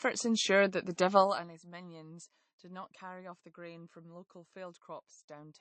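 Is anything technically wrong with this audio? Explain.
Yes, there are two faults.

Throughout the speech there is plainly audible lossy-codec damage, likely from MP3 compression. Nothing is present above 8.3 kHz, and the sibilants have a watery, swirling quality. That points to a low bitrate, around 35 kbps. Starved of bits, the encoder cuts off the treble at a fixed frequency and drops weak spectral lines. Those lines flicker on and off from frame to frame, and consonant attacks smear.

From 1.17 to 1.52 s, between "ensured that the" and "minions did not carry", the level falls by roughly 20 dB in 2 dB steps, about thirty steps per second, with no smoothing between them. This is zipper noise. Each abrupt gain jump puts a small discontinuity in the waveform, so a rapid ticking, zipping texture rides on the speech for the duration of the drop.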